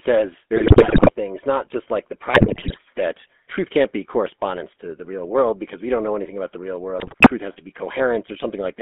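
A speech recording heard through the GSM full-rate codec, band-limited to roughly 200 Hz to 3.4 kHz and fitting 13 kbit/s, carries a steady buzzy, gravelly roughness that, unlike general narrowband muffling, comes from pulse-driven vocal-tract modelling. GSM bit errors add squawks, pops and gargling at 0.56–1.11 s (before "things not just like"), 2.34–2.79 s (after "not just like the") and 6.98–7.31 s (after "anything about the real"). These are corrupted decoder parameters bending the level and spectrum, not dropouts or clipping.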